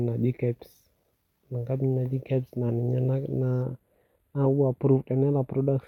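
From 3.62 s to the end at 5.88 s, channel delay (comb filtering) sets in. One channel lags by about a tenth of a millisecond, so the mono sum cancels near 5 kHz and its odd multiples. Unlike flanging, the notches never sweep, leaving the speech steadily hollow.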